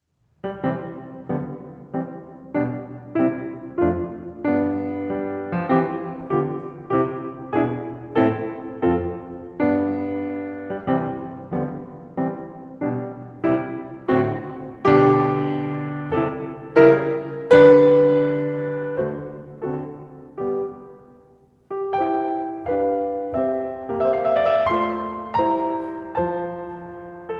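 Nothing goes wrong in this music; it simply carries the usual coding texture and the top end stopping around 8 kHz that you'd expect from a call codec, which fits Opus at a modest bitrate.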